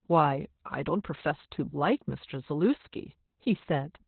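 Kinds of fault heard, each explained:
Opus voice compression: the codec has dropped to its SILK speech coder in narrowband mode, which fits a rate near 8 kbps. Nothing survives above 4.3 kHz and the excitation is coarsely coded, so the speech sounds muffled, hoarse and faintly robotic throughout.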